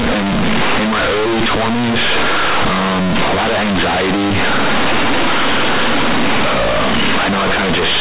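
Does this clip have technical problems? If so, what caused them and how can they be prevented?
Yes. Throughout the speech, companded audio is read as linear: mu-law bytes, correctly coded as G.711 telephone audio, are played back as plain 8-bit samples without expansion. Every sign change throws the output across half its range, so quiet passages become as loud as peaks, giving harsh, buzzy distortion and heavy noise in the pauses. To prevent this, make sure the player or receiving stage knows the stream is mu-law and decodes it to linear samples before playback.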